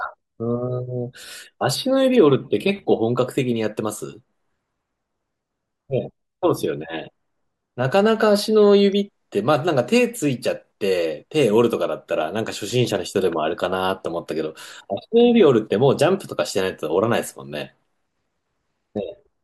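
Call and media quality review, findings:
No faults found in review.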